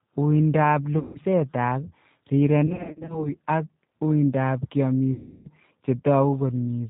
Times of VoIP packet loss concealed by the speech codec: 0.99-1.19, 2.67-3.31, 5.14-5.49

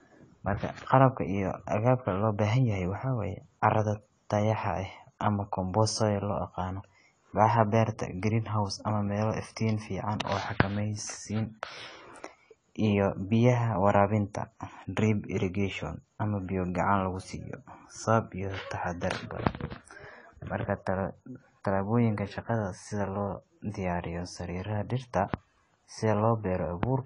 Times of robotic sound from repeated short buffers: none

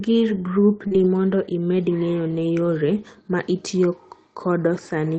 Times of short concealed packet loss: 0.87-0.93

